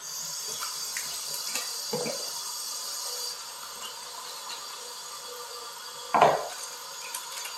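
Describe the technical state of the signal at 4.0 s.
At 4.0 s the signal is intact, with no dropout, distortion, glitch or other fault audible in the sound at that point.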